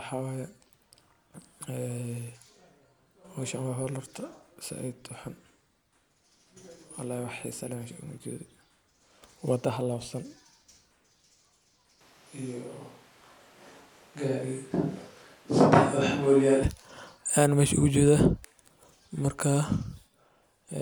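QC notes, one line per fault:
12.01 to 16.63 s, switch to a distant microphone: the speech abruptly turns roomy and hollow, with thinner bass, then snaps back just as suddenly, most likely because the close microphone dropped out and a farther one took over. Loudness stays about the same, but room noise rises to about 35 dB below the speech. A spectrogram shows the low end thinning and reverberant smearing between syllables; the waveform shows a raised noise floor in the gaps, with hard edges at both ends.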